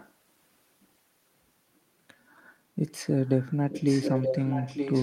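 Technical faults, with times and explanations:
0.00–0.12 s, 3.02–3.48 s and 3.70–5.02 s, echo leak: a delayed copy of the speech returns 0.93 s late, faint in the first two stretches and nearly as loud as the talker in the last. This is likely a far-end loudspeaker echo that the echo canceller did not fully remove. Unlike room reverberation, it is a distinct, separated repeat rather than a smeared tail.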